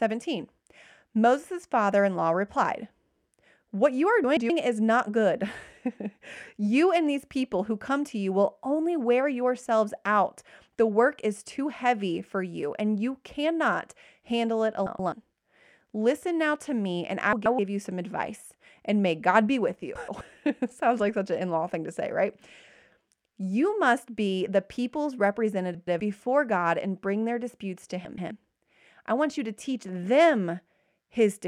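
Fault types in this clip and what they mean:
Frames out of order: two adjacent 128 ms blocks play swapped. Six brief garbled flutters result. No time is lost.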